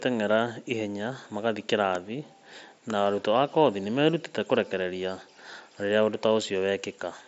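Nothing goes wrong anywhere in this speech, which comes over a wideband Bluetooth mSBC headset link with the light graininess and roughly 8 kHz ceiling that codec normally brings.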